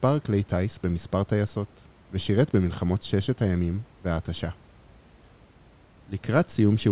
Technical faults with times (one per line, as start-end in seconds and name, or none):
none